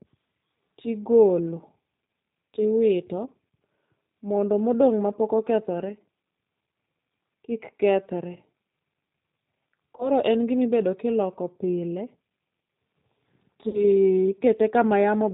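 Across the whole clip the speech carries the sound of the G.729 codec. The sound is band-limited, rough and faintly synthetic, which fits G.729A at 8 kbit/s. The coder rebuilds each 10 ms frame from a vocal tract filter, a pitch predictor and a handful of pulses, so fine detail is replaced by a modelled approximation. On a spectrogram, all energy stops sharply at 4 kHz, and harmonics look smeared and slightly grainy rather than clean.

From 9.97 to 10.10 s, just before "en gima", there is VoIP packet loss concealed by the speech codec. About 20 ms of audio went missing, pointing to a single lost packet. The decoder filled the gap by extending its last pitch and filter with falling gain, so the sound stretches into a brief buzzy tone or coloured noise that fades. Because each frame builds on the previous one, it stays weak or distorted for a while after packets return. On the waveform this shows as a short stretch of extended sound with a sagging envelope. 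On the spectrogram it appears as flat, frozen bands.

From 13.69 to 13.84 s, a second concealed loss covers about 40 ms, which fits two consecutive lost packets. The longer extrapolation stretches into a buzzy tone or coloured noise that fades before the speech recovers. On a spectrogram this looks like horizontal, unchanging bands that fade out. On the waveform the amplitude tapers steadily across the gap, then returns gradually rather than at once.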